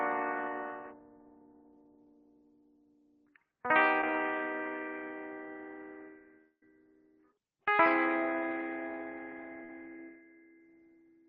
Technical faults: noise suppressor applied to music or sounds; short concealed packet loss; long network dropout; burst of packet loss

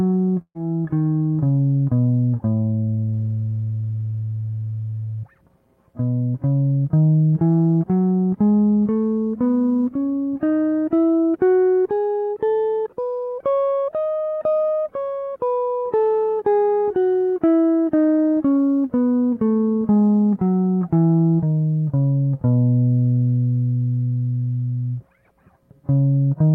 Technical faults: burst of packet loss

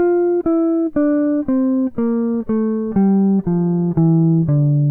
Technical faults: none

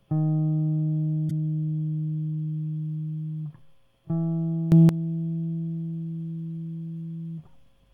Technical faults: corrupt frame decoded; sudden gain jump

